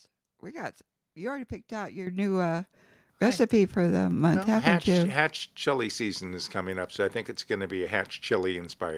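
The speech jumps abruptly louder, voice and background together, at 2.07 s after "you already picked out" (about 10 dB), at 3.09 s before "recipe for the" (about 5 dB), and at 5.73 s before "season is coming up" (about 2 dB). Each is a microphone volume step-up: the input gain was raised in one step.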